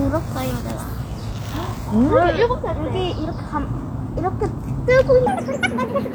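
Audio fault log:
5.27–6.14 s: section at the wrong speed. The closing stretch plays 1.77 times too fast, so pitch jumps roughly ten semitones, likely from playback against a mismatched clock.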